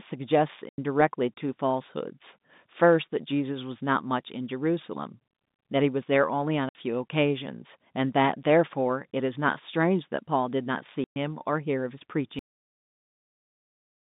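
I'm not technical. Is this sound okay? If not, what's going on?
No. There are two problems in this speech recording.

Packet loss filled with silence happens at 0.69 to 0.78 s, 6.69 to 6.75 s and 11.04 to 11.16 s. The sound travelled in small chunks, and some never arrived. The receiver played dead silence in their place, so the speech has sudden holes with sharp edges that can click. The gaps last 90, 60 and 120 milliseconds, all multiples of 30, which fits 30-millisecond chunks going missing together.

A cut-off end comes at 12.39 s. The recording stops abruptly in the middle of a sound instead of fading naturally, because the final stretch of audio was never written out. What follows is pure digital silence with no trailing echo. The break is hard enough that it may click. The last part of whatever was being said is simply gone.

The narrow, telephone-like tone comes from standard phone-line coding, which carries only the range roughly from 150 Hz to 3.7 kHz.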